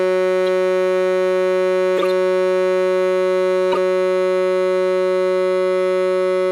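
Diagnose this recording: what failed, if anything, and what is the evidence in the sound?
Corrupt frames decoded at the codec stage put short bursts of misplaced energy into the music: a brief burst at 0.47 s, a longer burst from 1.97 to 2.11 s spanning several consecutive frames, and a loud pair-length burst at 3.72 to 3.77 s peaking near -5 dBFS.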